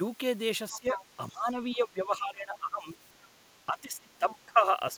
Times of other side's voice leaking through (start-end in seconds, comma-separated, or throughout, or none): 0.73-1.05, 1.71-1.76, 3.22-3.28, 4.30-4.35